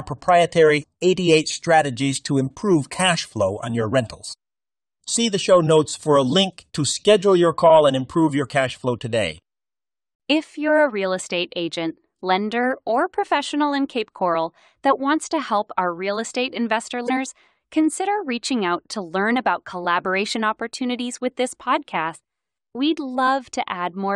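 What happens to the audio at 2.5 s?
Nothing goes wrong at 2.5 s; the speech runs through that moment intact, with no break or disturbance.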